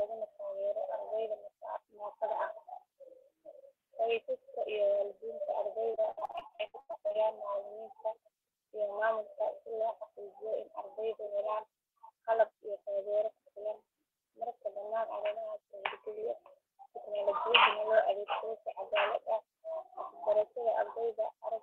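From 5.91 to 7.16 s, repeated packet loss (robotic sound) chops the speech: 17 gaps, the longest 93 ms, patched by extending prior audio across almost half the span. It sounds choppy and stuttering, with pieces missing. A spectrogram shows smeared, frozen harmonic streaks, and the waveform shows copied cycles.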